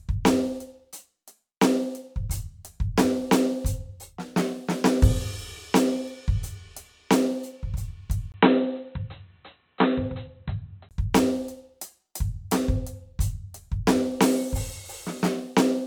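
From the start, the music has a swirly, hollow quality with blurred attacks, likely generation loss from about five successive MP3 passes near 134 kbit/s. A spectrogram would show patchy holes and smeared transients, with nothing above 20.1 kHz.

At 8.32 s a 20 ms silence interrupts the sound, and until 10.91 s it turns dull and boxy at the same loudness, likely an input switched to a poorer device. The spectrogram cuts off flat at 4 kHz, with added noise about 50 dB down.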